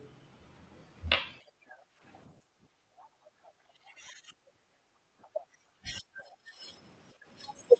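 Speech suppressed in double talk appears first as a brief dip of roughly 15 dB from 1.61 to 1.66 s in this speech recording. It returns more heavily between 3.82 and 6.62 s, where about a second and a half of the talker's voice is pulled down by as much as roughly 25 dB in broken stretches. The likely cause is an echo canceller that could not tell the near talker apart from loudspeaker echo while both sides spoke, so it attenuated everything together. The other side's voice leaking through sits about 30 dB under the speech, as a short scrap from 1.69 to 1.76 s, then 2.98 to 3.51 s, and a longer stretch from 5.22 to 6.36 s. It likely comes from far-end audio picked up off the loudspeaker that the canceller failed to subtract fully, leaving a faint second voice behind the main one. Background gated by the echo canceller shows in the room tone sinking by up to about 13 dB across 1.94 to 3.54 s (about a second of it affected) and by up to about 18 dB from 4.79 to 5.05 s. 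In both places the canceller clamped the microphone hard while the loudspeaker was active and then released it. Over all of this, the Opus call path limits the audio to about 8 kHz.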